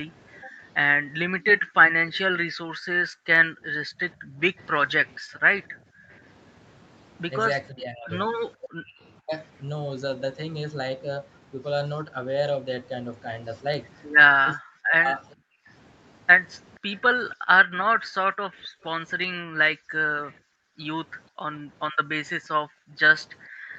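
From 0.44 to 6.09 s, the room sound between phrases is repeatedly pulled down by up to about 40 dB, for roughly a second in total: the echo canceller's gating of the background. On a spectrogram the noise floor shows as dark rectangular holes, and the waveform's quiet stretches flatten to almost nothing.

From 2.09 to 6.17 s, a faint second copy of the speech trails 480 ms behind, around 35 dB down. This is an echo leak, likely residue the far end's canceller failed to remove, visible as a weak, time-shifted ghost of the harmonic pattern.

From 3.89 to 4.59 s, the speech itself dips by roughly 25 dB for about a third of a second in total. From 7.7 to 9.33 s it drops by roughly 35 dB for about 0.7 s, and from 14.57 to 18.0 s by roughly 30 dB for about 0.3 s. This is speech suppressed in double talk, likely as the canceller mistook live speech for echo, and it appears as notches cut into the waveform envelope.

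From 15.38 to 23.73 s the background gating returns, again as deep as about 40 dB and covering roughly three seconds in total. From 18.83 to 23.23 s the same 480 ms echo leak reappears at a similarly low level, with the high band stopping at 8 kHz throughout.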